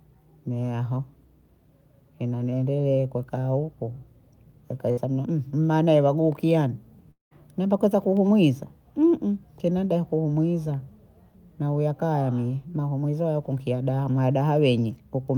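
At 4.91 to 4.99 s, a burst of packet loss drops about 60 ms of speech, bridged by a brief fading fill that never reaches silence. From 7.11 to 7.33 s, the fill dies away into about 140 ms of silence, likely a long network dropout, with about 200 ms lost.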